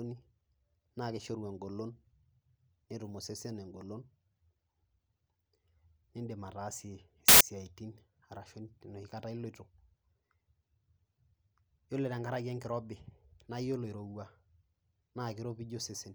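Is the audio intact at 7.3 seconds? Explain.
No. File tags played as audio run from 7.28 to 7.41 s, breaking into the speech for about 0.12 s. A block of embedded data, here a compressed cover picture, is being read by the decoder as though it were sound samples. Because compressed image bytes are close to random, they come out as very loud white noise: a sudden, harsh burst of static with abrupt, hard edges at both ends.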